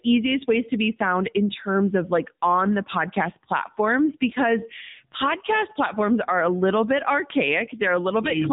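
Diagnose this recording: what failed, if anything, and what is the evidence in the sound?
The failure is at the codec stage: AMR narrowband mobile coding runs through the whole speech clip. Nothing above 3.8 kHz survives. The speech sounds buzzy and synthetic, which fits a low AMR-NB mode near 8 kbps. The vocal-tract model, fed by few pulses, smears natural detail.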